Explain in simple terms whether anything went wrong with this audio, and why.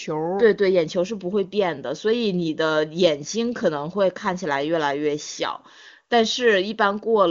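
Nothing went wrong here.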